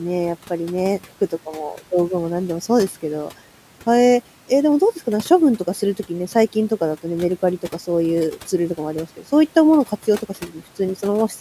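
Speech cut by the noise suppressor, from 10.29 to 10.78 s: the suppressor mistook part of the speech for background and pulled it down along with the noise, by about 10 dB at its deepest. Only a short stretch, roughly a seventh of a second in total, is affected within that window. Those moments sound swallowed and faint, as if a soft ending dropped away. The room noise, sitting about 21 dB below the speech, is part of the recording itself.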